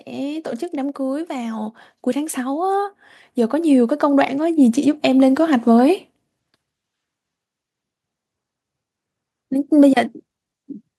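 From 0.05 s to 6.03 s, automatic gain rising: the gain control judged the input too quiet and kept lifting its gain, by about 12 dB in all. The speech and the background swell together steadily over those six seconds.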